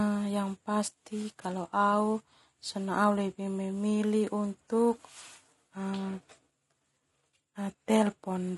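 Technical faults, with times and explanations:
Throughout, low-delay AAC compression: the speech is plainly rough and grainy, with noise between the harmonics, likely from AAC-ELD's short frames at a low bitrate, fitting about 32 kbps.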